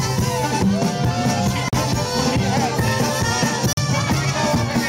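At 1.68 to 1.73 s and again at 3.73 to 3.77 s, the sound drops out for 44 ms, a gap between chunks. The audio arrives in 2.0 s blocks, and silence is inserted at each join. Nothing is lost, but the sound is interrupted at each join.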